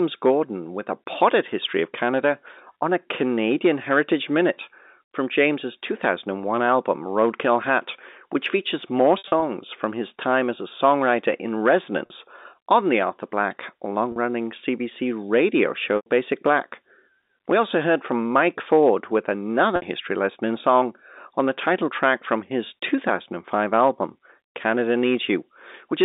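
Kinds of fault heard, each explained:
Packet loss with pitch repetition: Chunks of audio go missing and the receiver fills each gap by looping the last pitch cycle, so the sound briefly hangs on a buzzy, held tone. Between "which features more" and "from his time as", near 9.2 s, about 120 ms drops out in bursts over 240 ms. Shorter gaps follow at 12.06 s (about 40 ms), 15.96 s (about 100 ms) and 19.76 s (about 60 ms), before "history lesson in song".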